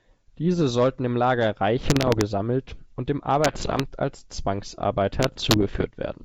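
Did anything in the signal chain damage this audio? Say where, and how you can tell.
Yes. The damage happened on the transmission link, as bit errors on an ADPCM link. Bursts of pops and gritty roughness, with brief jumps in level, appear from 1.82 to 2.23 s, 3.44 to 3.82 s and 5.16 to 5.86 s, at an error rate of roughly one or two percent. Each corrupted code throws off the decoder's step size and predictor, so the disturbance rings on briefly instead of clicking once. Packet loss would leave gaps or repeated fragments instead of this rough smearing.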